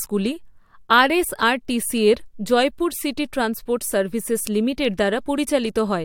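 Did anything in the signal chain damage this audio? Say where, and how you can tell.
No, nothing in the signal chain damaged this audio.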